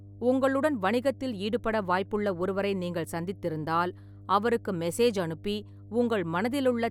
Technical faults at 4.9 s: mains hum

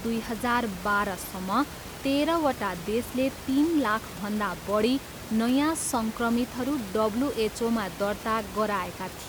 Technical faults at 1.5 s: none

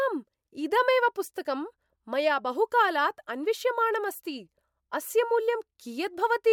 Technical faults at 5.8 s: none

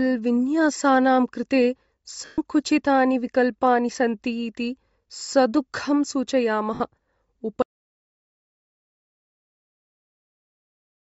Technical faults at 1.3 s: Bluetooth LC3 compression

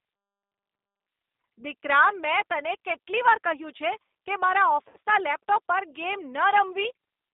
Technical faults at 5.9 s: G.729 codec

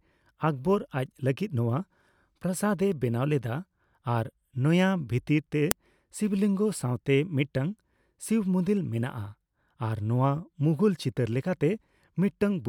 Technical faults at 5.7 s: file header played as audio

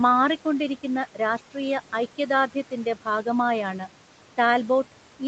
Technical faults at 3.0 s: noise suppressor artifacts; speech cut by the noise suppressor

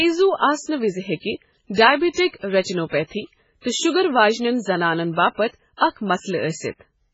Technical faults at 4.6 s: MP3 compression

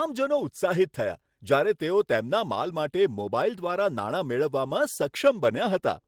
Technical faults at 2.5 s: none

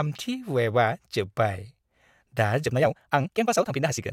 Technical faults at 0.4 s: none

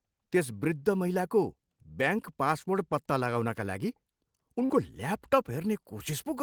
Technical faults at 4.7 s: short concealed packet loss

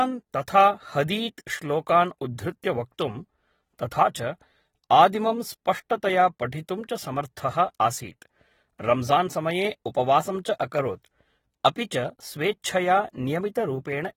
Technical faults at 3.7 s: AAC compression

